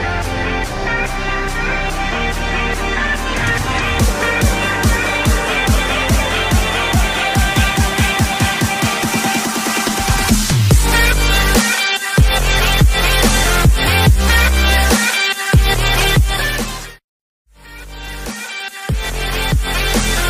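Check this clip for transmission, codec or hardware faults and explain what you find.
One codec fault is present. From 2.78 to 2.80 s, a corrupt frame decoded: misread bits misplaced energy, giving a short chirp, squeak, blip or noise burst with an error peak of about -15 dBFS and a thin vertical spectrogram stripe.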